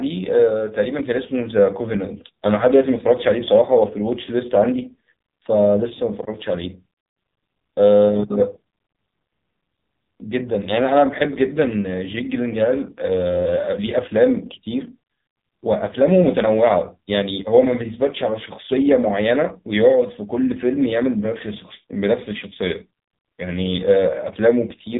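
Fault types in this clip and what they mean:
AMR narrowband mobile codec: the speech is rebuilt from a vocal-tract model sampled at 8 kHz. It sounds heavily buzzy and synthetic throughout, which fits a low mode around 5.9 kbps. A spectrogram shows a hard ceiling at 3.8 kHz, empty above.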